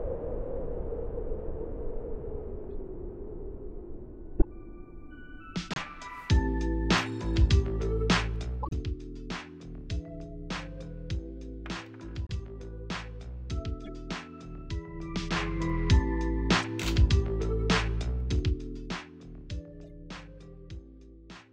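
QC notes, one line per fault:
2.70–2.74 s, 4.38–4.45 s, 5.71–5.78 s, 8.62–8.73 s, 12.27–12.31 s, 13.85–13.90 s, 16.58–16.65 s, 19.84 s: corrupt frame decoded. Damaged compressed frames were played anyway. Each spans a few frames and puts energy at wrong frequencies. The bursts range from faint blips to a loud one near 4.4 s.
8.17–8.92 s, 14.86–15.79 s, 17.93–19.04 s: zipper noise. The level drops, rises, then drops again by about 10 dB each time. It moves in 1 dB steps, roughly ten per second, with no smoothing. Each step clicks, so a ticking zip rides on the sound.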